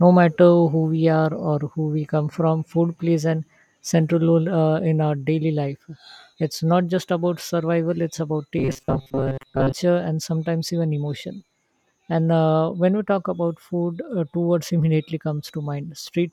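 From 8.58 to 9.73 s the speech turns into a rigid, metallic buzz pinned at 134 Hz. This is robotic sound from repeated short buffers. The likely cause is starved playback looping a 7.5 ms slice for most of that stretch. Unlike packet-loss warble, its pitch stays fixed and follows the speech only roughly.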